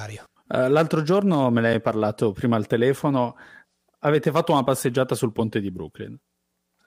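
At 1.73 s, between "l'altro giorno me ne" and "parlato prima al telefono", and at 4.24 s, just before "fatto una passeggiata sul", a gap between chunks drops in a 6.5 ms hole at each 2.5 s chunk join.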